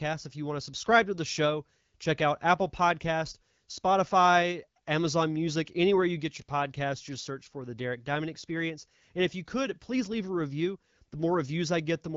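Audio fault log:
No faults heard.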